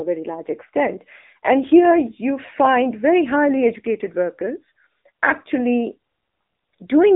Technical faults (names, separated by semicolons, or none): AMR narrowband mobile codec